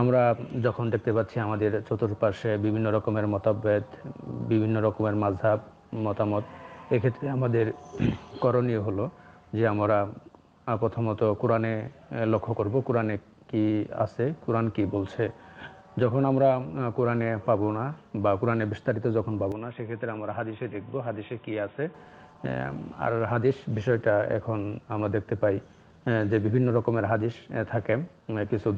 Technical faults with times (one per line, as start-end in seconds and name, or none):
19.52-21.94 input switched to a poorer device